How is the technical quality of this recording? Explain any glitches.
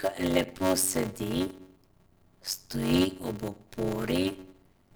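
The recording is marred throughout by a steady buzz at about 93.8 Hz riding under the speech, and the whole clip plays slowly, at 0.625 times normal speed, while the pitch stays roughly where it should be. This is a block size mismatch (padded): one stage delivers shorter blocks than the next one reads, so each block ends in a stretch of silence. That regular gap produces the buzz, and its rate fits a 512-sample read buffer.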